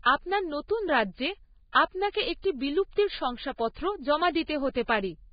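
Throughout the speech, a low-bitrate encoder, likely Vorbis compression, has cut everything above 4.9 kHz and coarsely quantised the remaining treble, which fits roughly 16 kbps. The heavy damage leaves the sound hissy and grainy, with roughened tones and smeared attacks.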